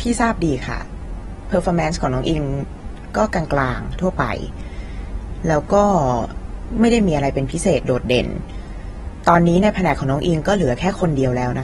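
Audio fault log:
Throughout, AAC compression: the speech has plainly audible codec damage, with a dull, smeared quality and some warble or fizz on sustained sounds and sibilants. Nothing comes through above about 11.8 kHz. That points to a low-bitrate encode, likely AAC-LC at around 31 kbps, where the encoder runs short of bits, drops the top of the spectrum and quantises what remains coarsely.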